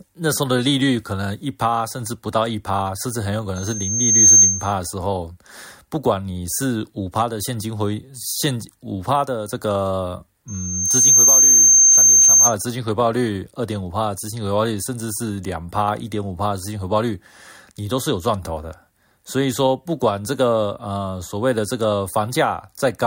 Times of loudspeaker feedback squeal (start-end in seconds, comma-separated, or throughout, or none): 3.56-4.73, 10.48-12.55